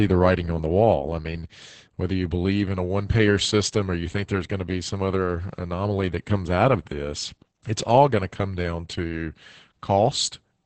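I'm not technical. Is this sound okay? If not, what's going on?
No. Opus voice compression runs through the whole clip. To save data, the speech was squeezed hard: everything above about 8.6 kHz is cut off, and the voice is rebuilt from a rough summary, so it sounds muffled, hoarse and faintly robotic.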